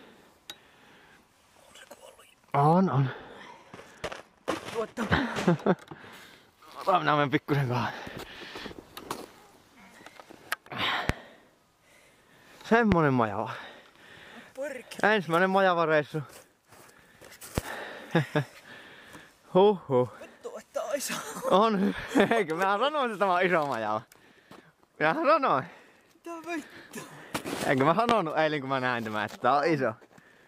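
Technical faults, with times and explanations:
2.73–6.13 s, de-emphasis applied wrongly: the treble rolls off smoothly, reaching about 13 dB down at 10 kHz relative to 1 kHz. A treble cut meant to reverse pre-emphasis has acted on audio without it, so the sound turns dull and muffled.
11.09–11.13 s, 12.92–12.95 s, 17.58–17.61 s and 28.09–28.13 s, loud pop: each is a single sharp pop, roughly 20 dB above the surrounding level, while the sound continues underneath. The likely cause is a brief voltage step or pulse from a plug, switch, static discharge or driver glitch.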